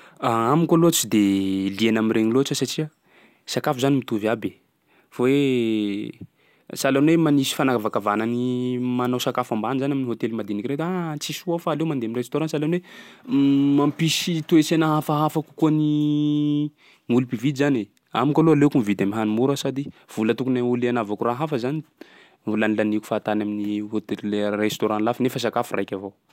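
No technical faults are audible.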